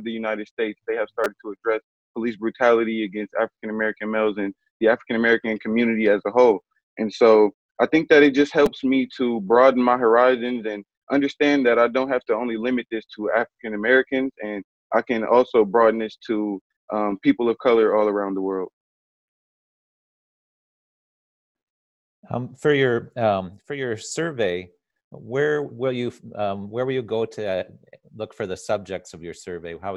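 At 1.24 s and again at 8.66 s, a repeated buffer occurs. New audio arrived late, so a block of about 5 ms was replayed three times, then twice, skipping roughly 15 ms and 10 ms. Each is heard as a brief buzzy click. The waveform shows identical short segments joined by hard steps, and the spectrogram shows a thin vertical smear.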